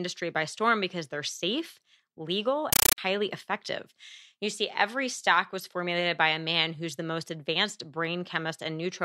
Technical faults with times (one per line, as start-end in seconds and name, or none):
2.73-2.98 compressed stream played as audio